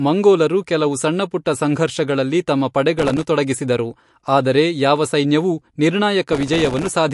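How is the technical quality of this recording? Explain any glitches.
The recording has clear technical problems: audible codec damage throughout, one pre-echo, and two bursts of crackle.

Throughout, the speech sounds watery and swirly, with nothing above 11.3 kHz. This is likely MP3 compression at a low bitrate, around 50 kbps, which drops weak frequency components and cuts the treble.

At 1.45 s, just after "ಮಂಗೋಲರು ಕೆಲವು ಸಣ್ಣಪುಟ್ಟ", there is pre-echo. A brief hiss of about 11 ms comes before an attack. The codec's noise smeared backward into the quiet moment before it.

From 2.99 to 3.24 s, after "ಕೆಲವು ಸಣ್ಣಪುಟ್ಟ ಸಂಘರ್ಷಗಳಲ್ಲಿ ತಮ್ಮ", and again from 6.33 to 6.95 s, there is processor overload crackle. Dozens of tiny buffers, each a millisecond or two long, missed their deadline. Each left a short silent gap, and together the gaps sound like gritty crackle.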